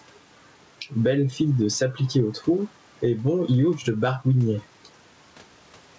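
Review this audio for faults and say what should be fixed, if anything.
Gain pumping runs through the whole clip. The room noise sits about 40 dB below the speech. The level swings by around ten decibels. Loud and soft syllables end up close in level, so the speech sounds squashed. The likely cause is microphone gain set far too high, with a fast limiter or compressor pulling it down on every loud sound. To prevent it, lower the input gain until the limiter rarely engages, and lengthen its attack and release times.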